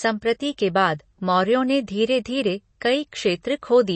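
From start to finish the speech sounds dull and band-limited, with nothing above 8.3 kHz and plainly audible codec damage. This is likely MP3 compression at a low bitrate, around 32 kbps. Starved of bits, the encoder cut the treble and coarsened what remained.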